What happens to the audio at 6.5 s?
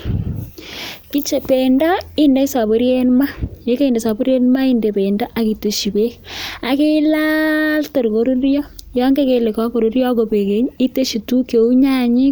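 At 6.54 s, right after "bendo ak itesyi beek", there is a single sharp click. It is a brief tick that lasts only an instant and leaves the surrounding sound untouched. The likely cause is dropped samples. Only a handful of samples, around a tenth of a millisecond, seem to be missing. The waveform then jumps straight from one value to a later one. That sudden step is heard as the click and shows as a thin vertical line across the spectrum.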